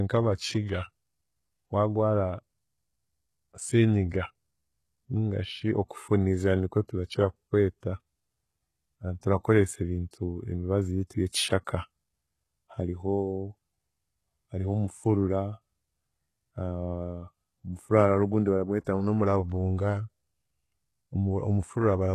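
HE-AAC compression affects the whole recording. Nothing sounds above about 12.3 kHz, and the upper band has a synthetic, grainy brightness that doesn't match the body of the speech. This is likely HE-AAC at a very low rate, around 16 kbps. The codec keeps only the lower spectrum and fills the treble by copying lower bands upward under a coarse envelope, so the harmonics don't line up across the crossover and sibilants come out gritty and lispy.

Pre-echo appears from 18.84 to 18.87 s, just before "ngu n'omuravunga". A short hiss of about 24 ms runs ahead of the attack, and the onset itself sounds softened rather than crisp. The transform codec spread its quantisation noise evenly across a block in which the sharp attack came late. Noise scaled for the loud part then leaked into the quiet gap ahead of it.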